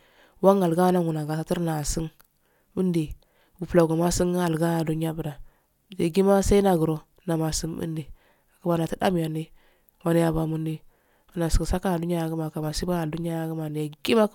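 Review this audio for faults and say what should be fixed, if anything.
Nothing here needs fixing: the signal holds steady and continuous throughout, with no technical problem to address.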